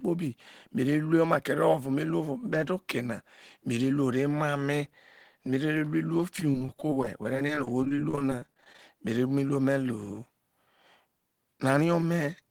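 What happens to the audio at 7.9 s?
At 7.9 s the audio is in a stretch of repeated packet loss (robotic sound) running from 6.36 to 8.79 s, ending just before "mere mu iruo me". Over this span dozens of short holes, none longer than about 24 ms, are patched by extending the preceding sound. Those patches add up to roughly 0.4 s, about a sixth of the stretch. The speech comes out choppy, with small pieces missing.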